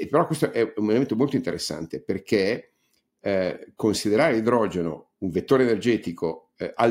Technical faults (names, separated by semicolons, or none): none